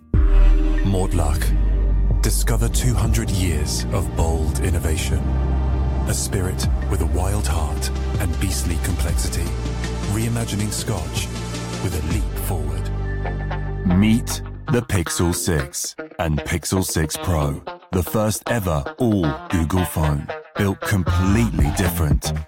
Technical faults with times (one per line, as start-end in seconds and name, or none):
none